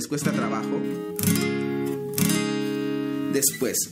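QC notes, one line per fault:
0.84 s to end: pre-emphasis left on. From 0.84 s the treble rises steadily, about 13 dB stronger at 10 kHz than at 1 kHz, so the sound turns thin, bright and hissy-edged where the matching de-emphasis cut was never applied. The gentle rise, starting near 2 kHz and climbing smoothly rather than forming a single peak or shelf, points to the FM 75 µs curve and separates it from a resonant presence boost or a harsh tweeter-style EQ.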